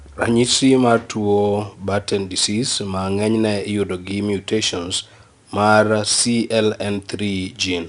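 Speech, with 4-bit ADPCM compression throughout. Gritty hiss tracks the level and attacks distort. Nothing above 10.6 kHz suggests a low sample rate.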